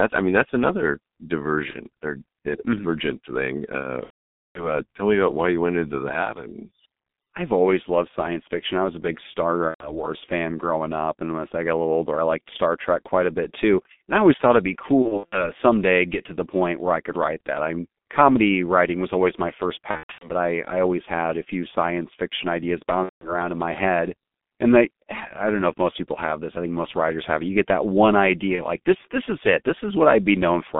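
G.723.1 codec throughout the speech: its roughly 6.3 kbit/s coding and 200 Hz to 3.6 kHz band leave the sound muffled and hoarse, with smeared consonants.

VoIP packet loss concealed by the speech codec appears at 1.70 s, from 4.04 to 4.80 s, 9.68 to 10.04 s (just before "fan growing up"), 15.02 to 15.50 s (between "always thought it'd be" and "someday get to the"), 19.91 to 20.29 s (between "was always my first" and "but I I always"), 23.03 to 23.35 s, and at 28.56 s. The decoder extrapolates from its last pitch and filter, producing a fading buzzy tone or coloured noise, and the voice stays weak after packets return. The longest gap, about half a second at 4.04 s, fits a run of lost 30 ms frames.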